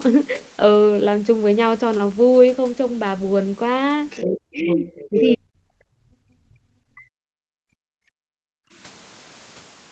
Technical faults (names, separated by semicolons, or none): other side's voice leaking through; speech suppressed in double talk; background gated by the echo canceller